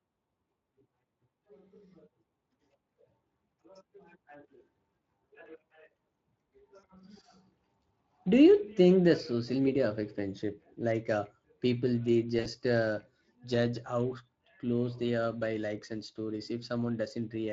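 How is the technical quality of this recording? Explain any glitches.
The recording has plainly audible Speex codec damage throughout, plus two short dropouts.

The Speex codec runs at about 20.6 kbps here, and its damage is plainly audible, so the speech sounds hoarse and noisy.

VoIP packet loss concealed by the speech codec hits at 6.79–6.85 s (about 40 ms) and 12.39–12.48 s (about 60 ms). The decoder stretches the last sound into a fading tone or noise, and the voice stays weak briefly afterwards.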